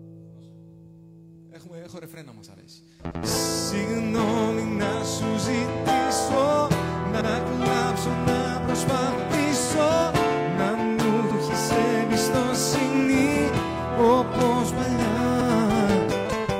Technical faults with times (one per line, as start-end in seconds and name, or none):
3.11-3.21 overlapping chunks
7.21-7.31 overlapping chunks
11.31-11.41 overlapping chunks
15.41-15.51 overlapping chunks